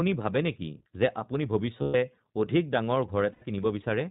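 The whole recording passes through the iLBC codec. This narrowband VoIP coder codes each frame's excitation on its own. Nothing above 4 kHz survives, so the speech sounds boxed-in and thin. The coding damage is plainly audible: a rough, slightly synthetic edge on every syllable. The texture fits the 15.2 kbps mode with 20 ms frames.

Lost iLBC frames follow. The first gap runs from 1.82 to 1.96 s, right after "ভাৱে নেকি যে আপুনি". It lasts 120 ms, which points to six dropped 20 ms frames. The decoder fills the hole by repeating the last pitch cycle mixed with noise. It sounds like a held, faintly buzzy vowel. A second gap of 100 ms, about five frames, sits at 3.32 to 3.43 s. Each frame decodes independently, so clean speech resumes almost immediately after each gap.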